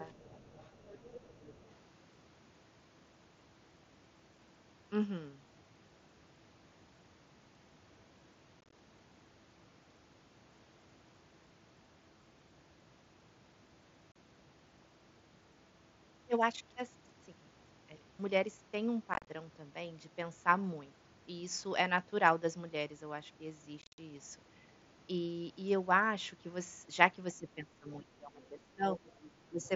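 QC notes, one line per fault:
0.09–1.71 s, 29.06–29.31 s, 29.62–29.68 s, other side's voice leaking through: a faint second voice, roughly 25 dB below the talker, sits under the sound. This is likely loudspeaker playback that the echo canceller left in the microphone signal.
8.61–8.73 s, 14.12–14.16 s, 19.14–19.27 s, 23.82–23.98 s, unconcealed Bluetooth headset packet loss: the audio breaks into hard-edged holes with a rough, chopped texture. The losses total 75, 37.5, 97.5 and 142.5 ms, with runs up to 52.5 ms. This fits dropped 7.5 ms mSBC frames replaced by silence rather than patched over.
27.33–29.05 s, 29.45–29.71 s, speech suppressed in double talk: the talker's level sags and breaks up in pieces, about 15 dB at the deepest point in the first stretch and about 10 dB in the second, for roughly 1.3 seconds in total. The likely cause is the echo canceller ducking everything while both sides spoke at once, with the leaked far voice audible around 29.06 s and 29.62 s.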